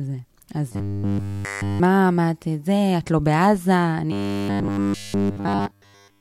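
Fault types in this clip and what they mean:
Robotic sound from repeated short buffers: the speech turns into a stiff metallic buzz at 100 Hz, likely from a 10 ms chunk looping while fresh audio fails to arrive.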